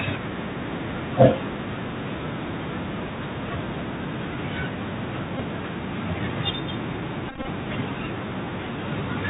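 Throughout, the speech carries the Bluetooth CVSD headset codec's sound: nothing above 4 kHz, scratchy s sounds and granular hiss, which fits one-bit delta coding at 64 kbps, unlike a muffled low-pass filter.

From 1.21 to 1.26 s, a harsh crackle on the loudest syllable points to microphone overload, likely peaks about 3 dB past the converter's limit, flattened at the top rather than smeared.

At 5.37 to 5.40 s, a Bluetooth headset packet repeated fault leaves about 19 ms of buzzy roughness. From 7.29 to 7.48 s, about 116 ms is lost in scattered runs of up to roughly 20 ms. Runs of repeats give a steady buzz near 267 Hz and single repeats only small ticks, a 3.75 ms repeat rather than a silent dropout.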